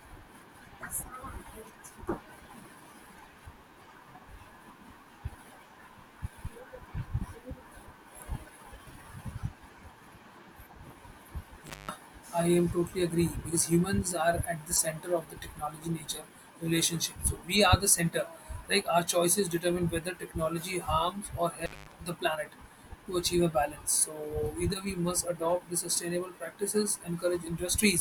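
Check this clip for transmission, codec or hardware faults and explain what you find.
Two dropouts from an intermittent contact occur in the speech, at 11.67–11.91 s and 21.59–21.94 s. A loose plug or cable briefly opens the signal path for about 190 ms and 210 ms. The speech cuts out, with crackle at each edge and faint hiss in the gap. A waveform shows near-flat stretches bounded by sharp spikes, and a spectrogram shows vertical broadband lines framing a dark gap.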